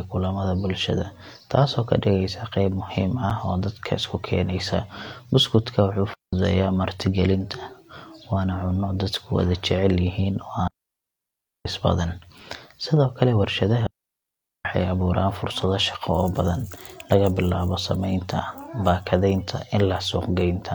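At 3.30 s, just after "qeyb muhiim", a hard-edged hole of about 7 ms briefly cuts the speech. This is a gap between stream segments: the time stamps of adjacent 6-second segments failed to meet, so the player filled the space with silence.

At 6.14–6.33 s, 10.68–11.65 s and 13.87–14.65 s, the speech drops into clean near-silence lasting about 0.19 s, 0.98 s and 0.79 s, with no noise burst on either side. These are digital wireless dropouts, where the link lost too much data and the receiver muted with a very short fade.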